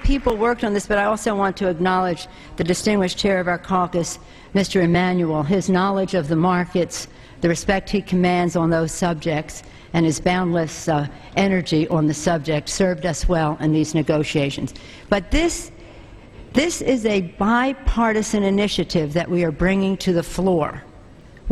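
Clicks recur every 2.32 s from 0.3 s to 21.2 s, showing as evenly spaced thin vertical spectrogram lines: likely clock drift buffer slips, each dropping or repeating a small sample block.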